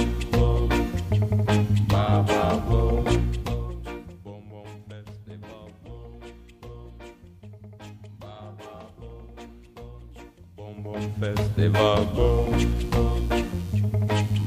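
Computer activity noise from 12.2 s to the end: load changes in the computer disturb the audio circuit's shared ground, adding a buzzing chirp pulsing around 100 Hz, roughly 30 dB below the sound.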